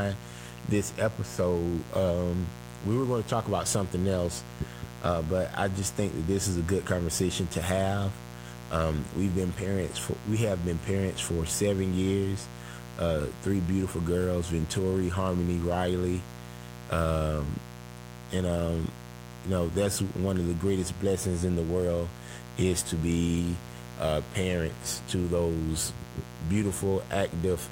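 Mains buzz runs throughout, about 15 dB below the speech: switching spikes on the 60 Hz supply leak in, adding harmonics that form a steady, raspy buzz.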